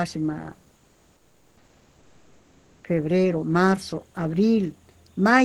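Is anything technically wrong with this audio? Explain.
Yes. From 0.76 to 2.83 s, just before "febrero marzo", the sender likely stopped transmitting during the pause (discontinuous transmission, as in Opus DTX), and the receiver filled those 2.07 s with comfort noise in place of the background: a steady, featureless hiss about 3 dB quieter than the real room noise heard elsewhere.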